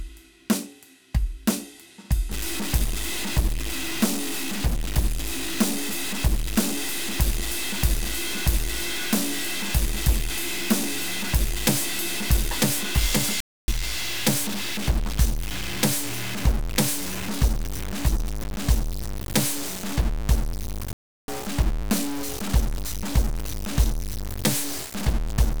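Music that turns distorted from about 2.3 s to the end, with a gritty edge fused onto every sound and noise filling the quieter moments instead of silence. That pattern is typical of a stuck bit: one bit of each sample is likely held at a fixed value by a faulty line or converter. Roughly half the samples then land off by that bit's weight, following the waveform, and the stuck bit's effect changes with the sign of small values around zero, so the quiet passages fill with hiss. The music also drops out completely twice, from 13.40 to 13.68 s (about 0.28 s) and from 20.93 to 21.28 s (about 0.35 s). Each time it cuts off abruptly mid-phrase and then resumes. These are playback stalls, most likely the player running short of data or having its thread blocked, so output falls silent until it catches up.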